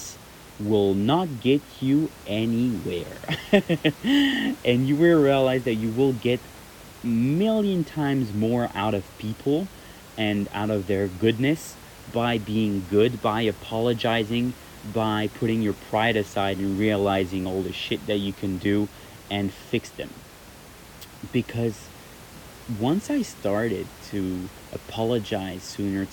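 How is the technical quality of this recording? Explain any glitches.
The technical quality of this speech recording is sound, with no glitches to explain, only the room's own background noise sitting about 21 dB below the speech.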